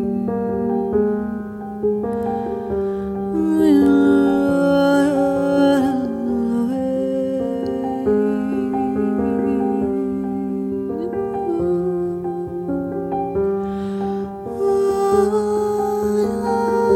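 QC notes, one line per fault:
No faults detected.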